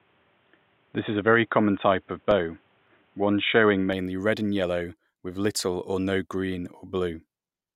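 The input was likely routed through a poorer device from the start until 3.93 s, so the speech has nothing above 3.8 kHz and sounds dull, with faint noise about 40 dB down. It clears abruptly, without a gap, just before "red and yellow with." Between 1.75 and 2.87 s, CD scratch ticks appear: damaged disc data the player could not rebuild causes seven very brief, regularly spaced ticks.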